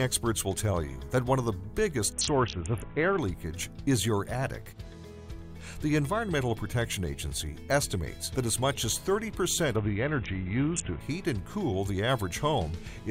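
Twice, from 2.13 to 3.18 s and again from 9.76 to 11.0 s, there's a Bluetooth SBC bit pool drop. The treble goes dull and a gritty grain creeps in, which fits the encoder falling to a bit pool around 5, roughly 54 kbps, before recovering.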